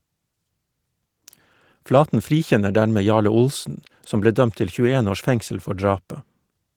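Nothing in the recording stood out as a technical problem on listening.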